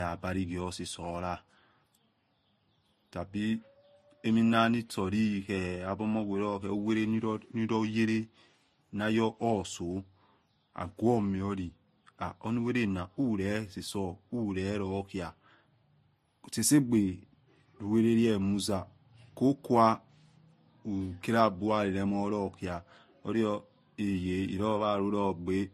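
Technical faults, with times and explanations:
Throughout: transcoding between lossy codecs. Two layers of coding artefacts are heard together in the speech, with nothing above 13.9 kHz. This is likely a low-bitrate MP3 re-encoded to Vorbis, where the second encoder spends bits on the first one's artefacts and adds its own.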